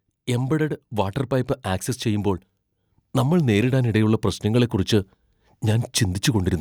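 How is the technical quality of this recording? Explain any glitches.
There is one glitch. From 3.15 to 4.78 s, automatic gain rising: the gain control judged the input too quiet and ramped up about 4 dB, so speech and background swell together.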